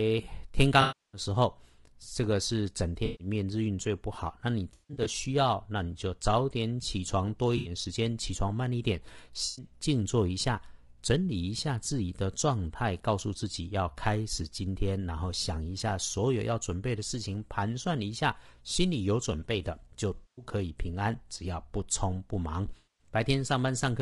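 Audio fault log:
throughout, low-delay AAC compression: The speech sounds rough and grainy, with a noisy haze between the harmonics and a thin, synthetic-sounding top band. The likely cause is a low-delay AAC codec such as AAC-ELD, at a bitrate that fits about 32 kbps. Its short frames resolve pitch poorly.
0.81–1.21 s, 3.05–3.27 s, 4.73–5.07 s, 7.57–7.71 s, 9.45–9.65 s, 20.15–20.45 s, 22.77–23.09 s, AAC frame loss with concealment: Each patch turns smeared, noisy or phasey. Missing stretches run from 80 ms to 320 ms, and the 4.73 s patch is broken up, with its longest gap around 150 ms. The decoder fills each gap by repeating and scrambling the last good spectrum.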